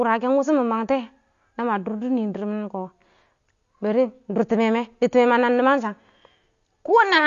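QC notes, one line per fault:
Throughout, AAC compression: dull, smeared speech with nothing above 7 kHz and plainly audible codec damage, likely AAC-LC coding at a low bitrate, around 32 kbps.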